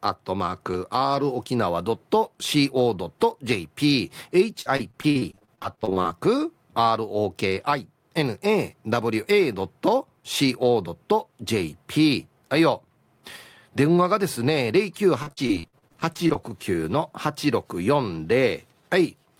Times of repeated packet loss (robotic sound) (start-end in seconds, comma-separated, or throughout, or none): 4.61-6.07, 15.22-16.50